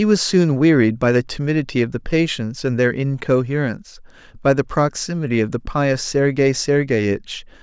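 No technical faults can be heard anywhere in it.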